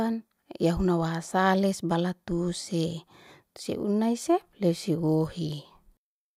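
No technical faults are audible anywhere in the recording.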